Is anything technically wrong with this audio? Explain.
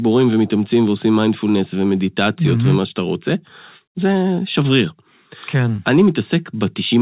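Yes, there's one short concealed packet loss, from about 5.76 to 5.80 s. Roughly 20 ms of the call never made it to the decoder in time, so the receiver patched the gap by carrying the previous sound forward, pitched if it was voiced, noise-shaped if not, then crossfaded back into the real signal. You hear it as a tiny smear or wobble right there, and a quick consonant could get swallowed. The audio comes through a call codec that cuts off around 4 kHz, which fits narrowband G.711.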